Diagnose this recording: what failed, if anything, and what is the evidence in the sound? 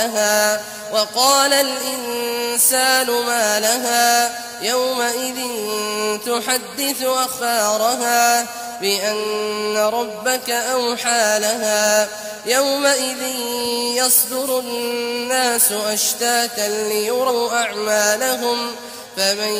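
The codec stage skipped compressed frames at 7.36 s and 17.26 s. At each point the audio jumps ahead by roughly a tenth of a second, about two frames, which fits a 42.7 ms frame.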